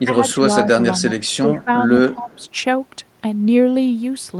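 An echo canceller likely struggling with both sides talking at once produces speech suppressed in double talk from 0.0 to 0.38 s, where the voice dips by about 10 dB. Inside that stretch, at 0.29 to 0.33 s, an echo leak, likely from a loudspeaker echo the canceller failed to remove, adds a faint copy of the voice delayed by 229 ms, about 30 dB below the speech. The same likely double-talk suppression returns at 0.72 to 0.78 s and 1.15 to 1.19 s as brief dips of about 15 dB. The likely leaked echo comes back at 1.24 to 1.37 s, again 229 ms late and about 35 dB down. Further likely double-talk suppression at 1.46 to 1.71 s and 2.09 to 2.42 s pulls the voice down by about 15 dB, overlapping a final likely echo leak at 2.32 to 2.47 s that trails by 229 ms at about 35 dB below the speech.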